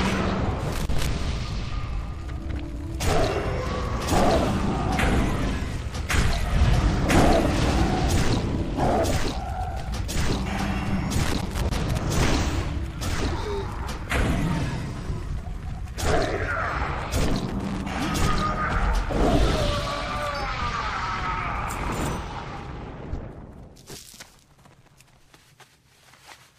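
A worn or dirty contact in the signal path is making and breaking intermittently, producing loose connector crackle at 0.72–1.07 s, 11.23–11.98 s and 17.48–18.01 s. Each time the connection chops the signal, leaving an irregular burst of scratchy crackle.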